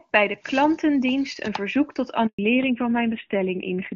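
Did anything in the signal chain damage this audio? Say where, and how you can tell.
Yes. A handover gap at the network stage cuts the sound from 2.27 to 2.39 s. The speech fades within a few tens of milliseconds and leaves 120 ms of true silence while the call moves to a new link. Unlike a burst of packet loss, nothing is concealed or smeared. The audio simply stops.

A fallback to narrowband follows at the codec stage. From 2.39 s to the end, nothing remains above 4 kHz, and the speech turns duller and rougher. Before the gap, the HD Voice wideband codec sounds like it was running near its top rate. A plain low-pass filter wouldn't add that coarse texture, and the change lines up exactly with the handover. Both point to a switch to a low-rate AMR narrowband mode.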